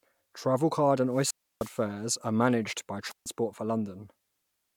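Speech with two wireless microphone squelch dropouts. From 1.10 to 1.84 s, just before "are managed by", hiss rises and the output mutes for 307 ms. From 3.08 to 3.27 s, right after "are managed by", a 145 ms mute follows. The radio signal faded, so the receiver squelched.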